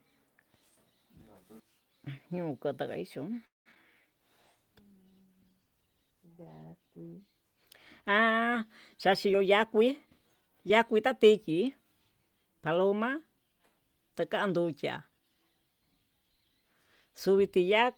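At 3.45 s the sound stalls until 3.68 s, most of it silent. This is a call audio freeze, likely from delayed packets emptying the jitter buffer.

Two short concealed packet losses follow, at 3.72 to 3.74 s and 3.74 to 3.77 s. Each hole is about 20 ms, filled by extending the last sound, giving a brief smear.

From 4.03 to 8.64 s a call bitrate drop makes the sound coarse and dull. This fits the encoder falling from 32 to 17 kbps for nearly 4 s.

From 9.08 to 11.07 s a jitter buffer speed-up runs the sound about 10% fast at unchanged pitch. Short pitch-period pieces are cut, about a fifth of a second overall.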